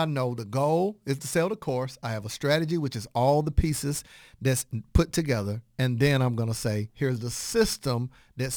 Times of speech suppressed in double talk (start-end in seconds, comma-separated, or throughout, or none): none